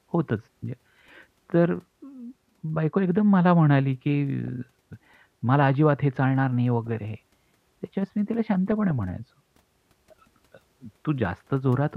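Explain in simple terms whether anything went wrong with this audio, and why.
A few short patches of DAB burbling turn up in this speech, at 0.93–1.01 s, 4.44–4.48 s, 6.87–7.05 s, 8.72–9.10 s and 11.27–11.68 s. Each one adds short blips of noise over the voice. This happens when weak digital radio reception lets a small share of bit errors slip past the error correction. Wrong values then land in individual frequency bands.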